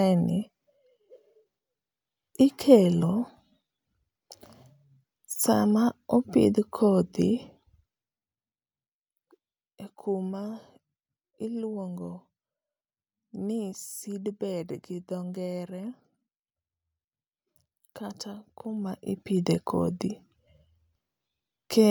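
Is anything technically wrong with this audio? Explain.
Yes. From 18.60 to 19.41 s there is zipper noise: the gain is moved in unsmoothed 1 dB jumps, around twenty per second across a change of roughly 15 dB. Each jump clicks, so a fine ticking rides on the speech while the level moves.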